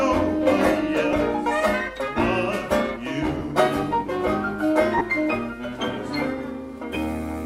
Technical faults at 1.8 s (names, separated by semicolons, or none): none